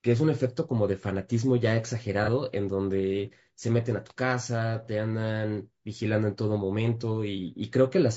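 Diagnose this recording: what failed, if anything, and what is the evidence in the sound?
Rough, grainy speech with noise between harmonics throughout points to the codec stage, likely low-delay AAC compression (AAC-ELD) at a low rate, around 32 kbps.

Brief smeared, noisy patches at 2.24–2.29 s and 4.85–4.89 s indicate AAC frame loss with concealment, the decoder patching a single lost frame from the last good spectrum.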